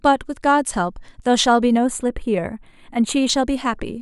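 Channel delay (comb filtering) runs from 1.77 to 3.29 s of this speech. One channel arrives roughly a tenth of a millisecond late, which fits a delay of a few samples. When the two are summed, cancellation notches appear starting near 5 kHz, dulling and hollowing the upper range.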